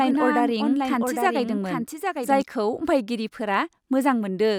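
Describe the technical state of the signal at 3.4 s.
At 3.4 s the audio is intact, with no dropout, clipping, glitch or other fault audible at that point.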